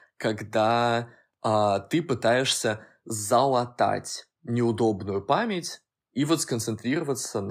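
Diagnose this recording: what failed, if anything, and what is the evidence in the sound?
Clock slip clicks run from 0.11 s to the end: faint, evenly spaced ticks roughly every 40 ms, around two hundred in all, blurring into a soft rattle under the louder, sustained parts of the speech. The likely cause is a clock-domain fault between converter and interface: two devices on unlocked clocks, differing by several hundred parts per million, so a single sample is dropped or repeated whenever that drift adds up to one sample. Buffer underruns would leave audible gaps instead. These ticks are tiny and metronomic.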